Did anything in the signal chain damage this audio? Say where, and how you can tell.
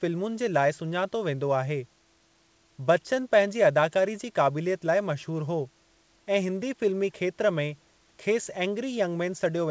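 No, nothing damaged it.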